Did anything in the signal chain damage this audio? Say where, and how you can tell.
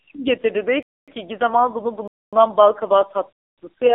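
Yes. The damage is a gap between chunks, introduced where the audio was split into pieces for streaming, storage or playback. Silent holes appear at 0.83–1.08 s, 2.08–2.33 s and 3.33–3.58 s. Each lasts 250 ms. They recur at a fixed rhythm, roughly one second of speech followed by a quarter second of silence. Nothing seems cut away. The sound simply stops at each join and resumes late, so the speech stutters in even steps.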